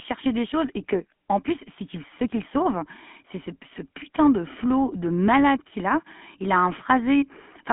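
GSM full-rate codec coloration runs through the whole speech clip. The voice is squeezed into a telephone band of roughly 150 Hz to 3.4 kHz with nothing above 3.7 kHz. A pulse-driven vocal-tract model, consistent with a 13 kbps coder, adds plainly audible buzzy, gravelly roughness.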